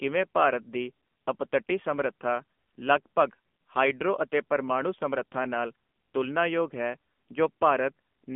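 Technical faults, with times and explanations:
Throughout, AMR narrowband mobile codec: speech squeezed into a 200 Hz to 3.4 kHz phone band, nothing above 3.5 kHz, and the low 7.4 kbps rate leaves it plainly buzzy and synthetic-sounding.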